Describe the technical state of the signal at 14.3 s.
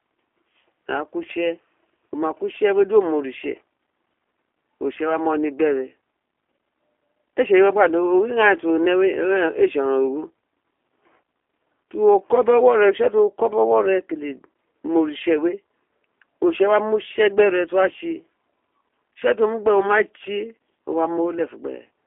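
At 14.3 s the speech is still carrying the G.729 codec damage that runs through the whole clip. The sound is squeezed into a phone band of about 300 Hz to 3.4 kHz, and it's rebuilt from a vocal tract filter plus a few pulses, which fits an 8 kbit/s G.729A stream. The result is plainly rough and slightly synthetic.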